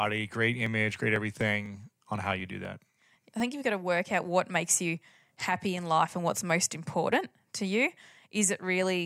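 Periodic USB or driver dropouts run through this speech from 0.66 to 3.65 s, ending just before "got to work out": roughly every 0.25 s about a millisecond of audio is skipped, giving around fifteen regular ticks as a background task stalls the bus or driver.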